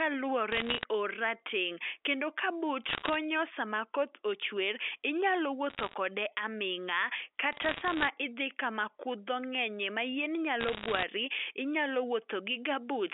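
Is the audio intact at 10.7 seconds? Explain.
No. From 10.60 to 11.03 s the sound is hit by bit errors on a digital phone line, at a rate of around one bit in a hundred on the G.711 mu-law stream. Each flipped bit corrupts a single sample, and hits on the sign or high-order bits produce sharp ticks, heard as crackle over the underlying audio. On the waveform, isolated one-sample spikes jut out; on a spectrogram, thin vertical streaks run across the whole 300 Hz to 3.5 kHz line band.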